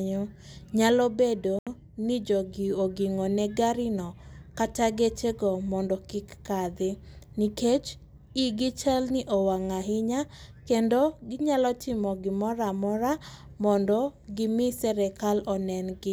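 Bluetooth stall, 1.59 to 1.67 s, between "nyalo bedo" and "ni jogi ogingone garino": the speech cuts to about 78 ms of silence, then resumes, likely because interference delayed packets and emptied the headphones' buffer.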